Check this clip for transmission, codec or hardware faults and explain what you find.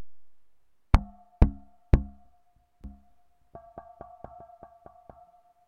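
There's one fault here: a doubled audio track from 2.84 s to the end. A second, somewhat quieter copy of the sound trails about a second behind, likely from a slower capture path recording it again. It cuts in abruptly, full-band and dry, with no reverberant tail.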